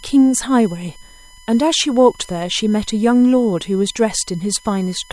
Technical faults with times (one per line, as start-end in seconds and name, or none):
0.00-5.12 USB whine